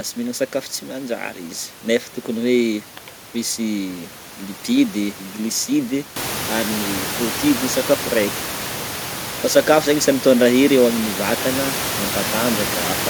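No technical faults can be heard in this speech recording. The background noise of the room rises by about 14 dB at around 6 s, and from there it sits about 9 dB below the speech.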